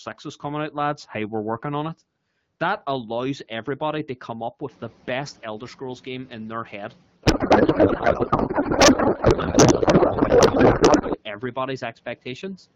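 Background noise in the room jumps by about 15 dB at around four and a half seconds. Right after "everybody to come up", at 4.7 s, the noise suppressor is catching up. Its noise estimate lags behind the sudden rise. So the louder noise passes with little reduction at first. Over the next 2.32 s the estimate adapts and the noise sinks by about 8 dB. By 7.02 s it sits well below the speech.

From 7.24 s to 11.18 s the codec payload is misread. The stream is AMR wideband, which sounds clean enough to fit a rate around 12.65 kbit/s. Here the packing is octet-aligned, but the receiver reads it as bandwidth-efficient. Every field lands in the wrong place. The decoder still finds frames that look valid. The speech vanishes under garbled noise and warble that barely tracks it. Normal audio returns once the formats agree.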